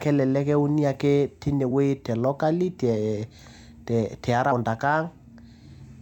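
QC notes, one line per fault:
4.51 s: damaged data in a compressed stream. A brief glitch as corrupted bytes make the decoder lose sync and skip ahead to the next frame header.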